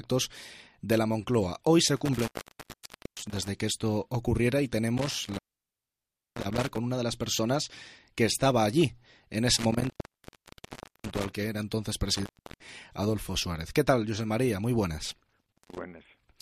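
Intermittent contact occurs five times: 1.96 to 3.48 s, 4.98 to 6.78 s, 9.57 to 11.35 s, 12.15 to 12.69 s and 15.41 to 15.81 s. A loose cable or plug briefly loses its connection, so the sound drops out or breaks up, with crackle where the contact makes and breaks. The open stretches last 0.89 s, 0.97 s, 1.15 s, 0.35 s and 0.17 s. The third gap is the longest, and the last is the shortest.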